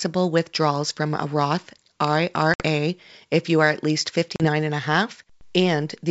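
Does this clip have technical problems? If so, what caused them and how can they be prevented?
Yes, there's packet loss on an ADPCM call: hard silent holes at 2.54 s (about 60 ms, roughly three packets) and 4.36 s (40 ms, a couple of packets). Afterwards the decoder's predictor and step size are out of sync with the sender's, so the sound comes back slightly roughened until it settles by 2.63 s and 4.48 s. To prevent it, use a jitter buffer with packet loss concealment that also resets or re-syncs the ADPCM decoder state after a gap.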